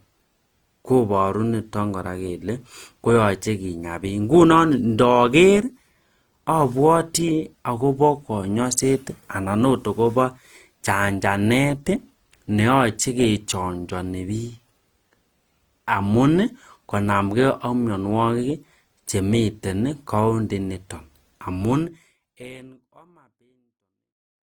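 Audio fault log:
throughout Opus compression: the speech sounds rough and grainy, with noisy fizz in place of clean detail but no MP3-style swirling holes. Bandwidth stays full, up to about 20.2 kHz, pointing to music mode at roughly 24 kbps as the likely cause.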